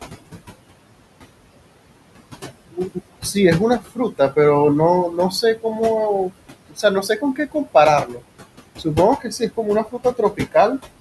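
Noise suppressor artifacts run through the whole recording. The suppressor pulls the steady room noise, which sits about 13 dB under the speech, down by about 20 dB wherever it judges a band to be noise only. So the background drops away in the gaps and comes back under each phrase. On a spectrogram the noise floor shows as a dark, blotchy field between phrases, broken by scattered isolated speckles of leftover energy.

The suppressor also mistakes parts of the speech itself for noise, which is speech cut by the noise suppressor. It happens at 3.8 to 4.37 s, 6.7 to 6.84 s, 7.03 to 7.75 s, 8.05 to 8.21 s, 9.19 to 9.58 s and 9.84 to 10.55 s. Within each stretch, a few short pieces of sound adding up to one or two tenths of a second, and closer to a third of a second in the last, are pushed down by about 12 to 17 dB, so they sound swallowed or faint. The waveform shows sudden dips in the envelope there, and the spectrogram shows speech energy cut out in patches.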